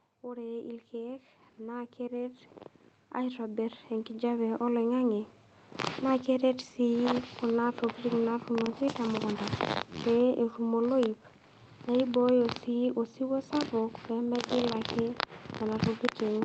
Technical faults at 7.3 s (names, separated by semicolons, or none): none